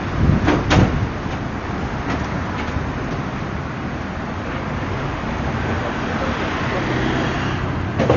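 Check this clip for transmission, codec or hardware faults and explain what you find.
One codec fault runs through the whole clip.

Dolby Digital compression, throughout: nothing is heard above 7 kHz, and the sound is dull, with a rough, fluttering noise around tones. This is likely an AC-3 encoder at a rate near 48 kbps, which narrows the band and leaves unfunded frequency lines for the decoder to fill with dither noise, causing heavy damage.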